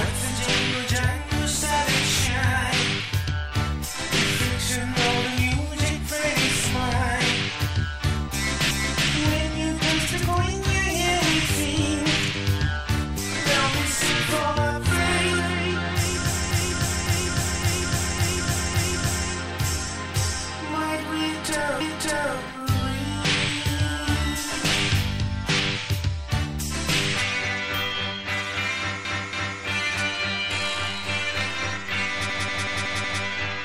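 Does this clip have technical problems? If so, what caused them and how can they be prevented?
Yes. Repeated frames: a run of compressed frames was written or delivered more than once, so the decoder plays the same stretch again. This causes stutters at 8.71–9.08 s (a 0.37 s block heard twice), 16.51–19.30 s (a 0.56 s block repeated five extra times), 21.81–22.36 s (0.56 s, once more), 29.05–29.61 s (0.28 s, twice more) and 32.30–33.23 s (a 0.19 s block, five extra times). Each seam can click, and together they add about 5.2 s. Preventing it means deduplicating frames by sequence number or timestamp before decoding.

DC step: the waveform's zero line suddenly shifts, as happens when a converter recalibrates or an input carrying an offset is switched in. At 30.54 s this is heard as a low thump. The offset then holds to the end, while the sound itself carries on over the shifted baseline, overlapping the last stutter. 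A high-pass or DC-blocking filter in the capture chain, and avoiding live input switching or recalibration during recording, prevents it.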